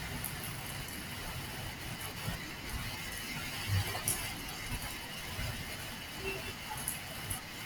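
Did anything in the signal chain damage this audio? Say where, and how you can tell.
No, nothing along the chain seems to have touched this speech recording, and there's no spot where the sound gets damaged.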